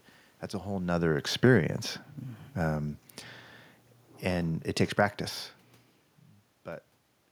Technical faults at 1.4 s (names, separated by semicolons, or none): automatic gain falling